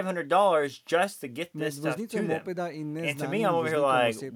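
A speech recording in which, from 1.67 to 3.39 s, a fine hiss and grittiness ride on the speech, strongest on loud, bright consonants and gone in pauses. This is sample clock jitter: converter timing wobbling by a microsecond or two, leaving errors roughly 35 dB below the speech.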